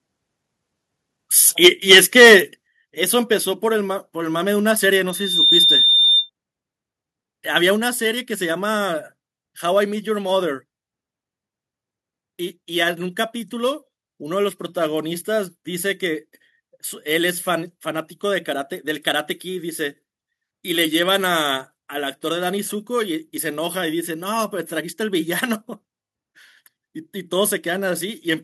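From 1.64 to 2.36 s the loudest peaks of the speech are flattened into a harsh, crackling edge. This is microphone overload, likely from an input volume set too high. The signal tries to go about 8 dB past the converter's limit, so the tops are sheared off, affecting roughly one sample in twenty. On a waveform the peaks sit as flat plateaus. A spectrogram shows broadband smears of distortion energy above the speech harmonics.

Within that stretch, at 1.67 s, the level of speech and background drops together by about 3 dB. A second, larger drop of about 7 dB follows at 2.67 s. Each is a microphone volume step-down, likely the call software cutting the device's input gain in one jump after hearing the distorted peaks. The waveform envelope falls abruptly at each point, and the spectrogram darkens evenly across all frequencies from that instant.

From 5.08 to 6.30 s a single piercing tone at 3.6 kHz swells up over roughly 0.4 s and then holds at about 5 dB above the speech. 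This is a loudspeaker feedback squeal. The microphone is picking up the loudspeaker it feeds, and at that frequency the loop gain exceeds one, so the tone keeps feeding itself. On a spectrogram it shows as one bright horizontal line at 3.6 kHz that thickens and brightens before it cuts off.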